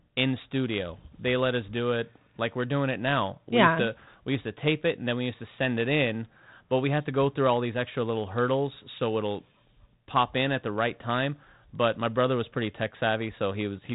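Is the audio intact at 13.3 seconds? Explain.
Yes, the audio is intact at 13.3 seconds, with no fault at that moment.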